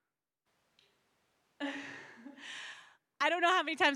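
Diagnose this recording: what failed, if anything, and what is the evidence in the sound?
Capture stage: from 0.48 to 2.72 s the speech abruptly turns roomy and thin at similar level, likely a switch to a distant microphone.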